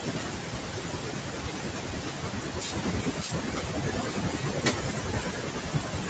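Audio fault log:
throughout, noise suppressor artifacts: the suppressor lowers, frame by frame, each band it judges to be steady noise, so the room noise, about 14 dB below the speech, sinks in the gaps between words and swells back up beneath them, giving an uneven, pumping background.
0.00–6.09 s, speech cut by the noise suppressor: across the whole clip the suppressor mistakes quieter parts of the speech for background and turns them down with it, by up to about 19 dB, so those stretches sound swallowed and faint against the louder speech around them.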